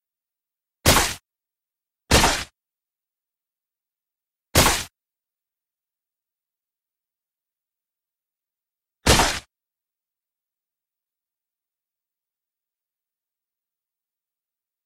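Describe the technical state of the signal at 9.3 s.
Dropped samples at 9.26 s: a single sharp click cuts across the sound at that instant, showing as a thin vertical line through the spectrum. The cause is likely a tiny gap in the sample stream, a fraction of a millisecond lost, so the waveform leaps straight from one value to a later one instead of moving smoothly between them. The gap is far too brief to remove any audible material; the abrupt step itself is what produces the click.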